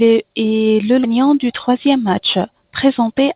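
Skip ahead at 1.04 to 1.06 s: this narrowband speech recording, band-limited to 4 kHz as G.711 mu-law suggests, jumps forward with no gap filled. Roughly 0.7 s of queued audio was dropped, splicing both sides almost directly and cutting that much delay. Jitter buffer speed-up from 1.68 to 2.37 s: the speech runs about 6% fast at unchanged pitch, sounding hurried, as the receiver trimmed around 50 ms in repeated pitch-period slices to shrink an overfull buffer.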